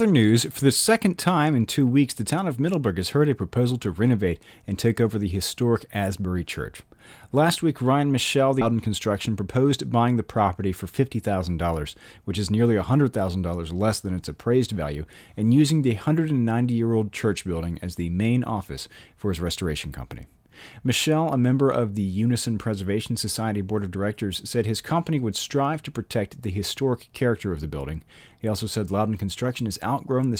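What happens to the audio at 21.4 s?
Nothing goes wrong at 21.4 s; the speech there plays through intact, with no dropout, click, distortion or other fault to be heard.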